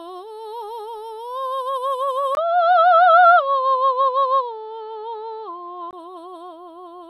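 At 2.35 s the music drops out for about 20 ms, then comes back dull and boxy, with nothing above 5.8 kHz, a level shift of roughly 5 dB, and a faint new noise floor sitting well below the music. That holds until 5.93 s, when the top end snaps back. The likely cause is an input switched to a poorer device mid-recording, a narrower-band mic with its own tone, gain and hiss, and then back again.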